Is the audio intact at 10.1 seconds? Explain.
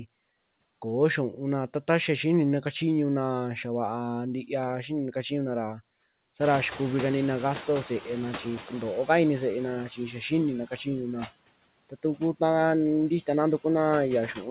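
No. From 9.89 to 10.31 s there is speech cut by the noise suppressor. It mistook part of the speech for background noise and turned it down, by about 10 dB at the deepest point. Only about a tenth of a second is affected in total. Those sounds come across faint or swallowed.

Noise suppressor artifacts are also present there. The suppressor lowers the noise by about 19 dB in the gaps, then lets it back in under the speech. It does this in each frequency band and frame by frame. The room noise rose at about 6.5 s.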